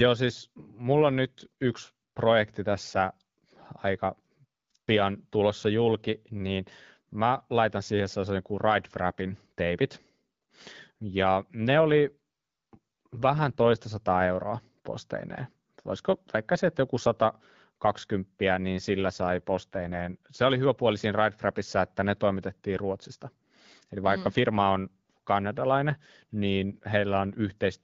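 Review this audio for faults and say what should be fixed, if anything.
Two AMR rate drops occur, from 11.70 to 13.84 s, ending just before "sataa euroa posteineen", and from 18.89 to 20.17 s. In both, the speech turns rougher and more synthetic while bandwidth stays unchanged and nothing drops out. This fits the link adapting the AMR-WB codec down from its usual 12.65 kbit/s to around 8.85 kbit/s to spend more bits on error protection. Clarity returns once the rate climbs back. Improving radio coverage or link quality at the handset would prevent these drops.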